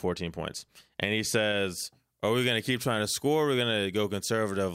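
Speech with pre-emphasis left on from 1.78 s to the end: the treble lift of a CD-style 50/15 µs curve was never undone, so 10 kHz sits about 8 dB hot and the sound turns thin and sibilant. On a spectrogram the upper band visibly brightens from 1.78 s onward.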